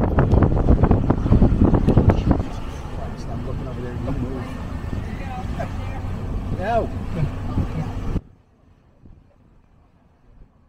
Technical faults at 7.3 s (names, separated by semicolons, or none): none